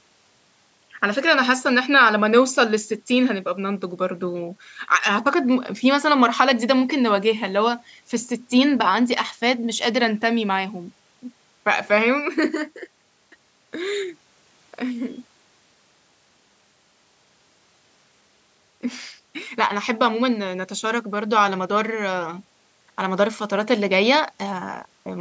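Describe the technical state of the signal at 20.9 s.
At 20.9 s the speech signal is intact, with no fault audible at that point; the call's microphone processing is working as it normally does.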